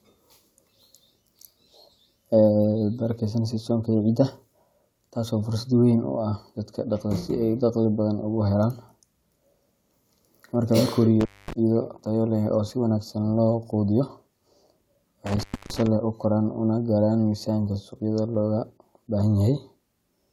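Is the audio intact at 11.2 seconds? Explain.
No, an intermittent contact breaks the speech from 11.20 to 11.53 s. A loose connection opens for 232 ms, and unlike a clean digital dropout, crackle marks its edges and faint hiss fills the gap.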